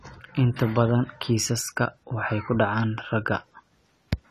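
From start to finish the speech sounds dull and smeared, with a watery, warbling texture on held sounds and sibilants. A spectrogram shows an abrupt ceiling near 13.9 kHz and patchy gaps below it. This is likely AAC compression at a low bitrate, around 32 kbps.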